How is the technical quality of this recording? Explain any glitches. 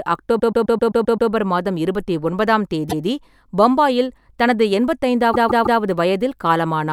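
The speech is marred by three stutters from repeated frames.

From 0.38 to 1.29 s, just before "மாதம் இருபத்தி ஒன்பதாம்", a 0.13 s fragment loops seven extra times. At 2.89 to 3.05 s, a 0.16 s fragment plays once more. At 5.32 to 5.79 s, after "பம்பாயில் தனது எண்பத்தி", a 0.16 s fragment repeats three extra times. The cause is runs of compressed frames being written or sent more than once, so the decoder replays them, adding about 1.5 s in total.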